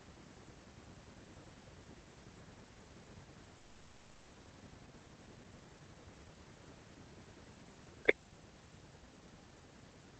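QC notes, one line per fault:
3.57 to 4.31 s, long network dropout: for about 0.72 s the sound smears into a synthetic buzz that fades without ever reaching true silence. When the audio resumes, roughly 400 ms of the original is missing. This is likely a stall in packet delivery, with the receiver stretching the last received sound to cover the gap and then skipping ahead. The late arrivals leave a backlog of roughly a third of a second.
4.39 to 5.95 s, jitter buffer speed-up: the receiver works off that backlog by repeatedly cutting out short slices of one or a few pitch periods. The sound therefore plays at about 119 % of normal speed with its pitch unchanged, and this stretch sounds hurried. Across these 1.56 s roughly 300 ms is discarded, bringing the delay back to target once the speech resumes normal pace.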